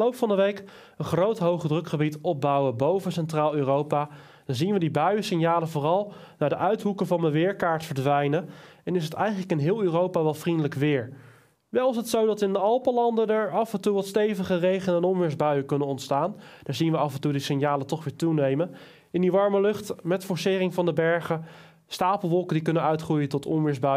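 No technical faults can be heard anywhere in this recording.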